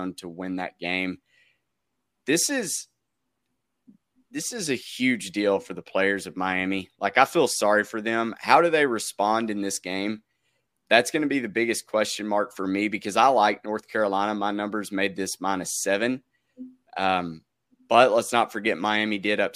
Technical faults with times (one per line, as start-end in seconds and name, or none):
none